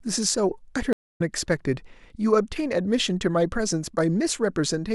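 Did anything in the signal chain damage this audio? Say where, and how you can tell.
Yes: a stream reconnect at the network stage. The speech drops out from 0.93 s to 1.21 s, with about 240 ms of silence, then resumes roughly 0.3 s further on. The connection broke, the player reconnected and restarted its decoder mid-stream, skipping that material.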